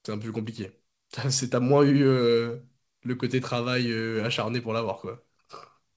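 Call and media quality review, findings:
Nothing to flag on this one; the speech comes over the call path as a normal wideband link would carry it, with nothing above 8 kHz, which fits G.722.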